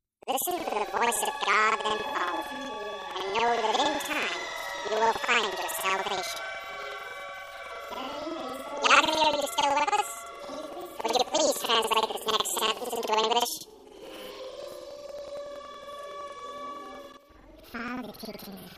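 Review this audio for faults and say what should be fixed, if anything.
Planar audio read as interleaved runs throughout: each block of about 93 ms, which fits a 4096-sample block, plays twice at double speed, left half then right, so the sound is an octave high with a flutter near 10.8 Hz. Unlike a simple sample-rate mismatch, the overall pace stays correct. To prevent it, make the reader check the stream's planar or interleaved flag and reorder samples before playback.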